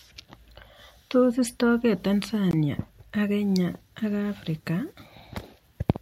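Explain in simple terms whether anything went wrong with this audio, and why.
Something did go wrong. At 2.51 seconds the speech cuts out completely, and it comes back at 2.53 seconds. The gap is only about 20 milliseconds long. The likely cause is a Bluetooth dropout. Sound travels to wireless headphones in small chunks. One chunk arrived too late and was thrown away. The silence fits one lost chunk. The speech then picks up where it would have been, skipping that moment.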